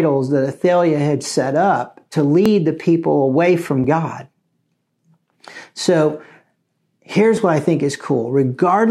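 Dropped buffers (overrun) at 2.46, 3.84 and 7.37 s in this speech make the sound jump forward with no gap. The first falls between "had set up to" and "the people away from" and skips about 10 ms. The second, just after "the people away from", and the third, just before "what I think", each skip about 5 ms. The likely cause is that the recording software fell behind and the hardware overwrote samples before they were collected, so both sides meet directly.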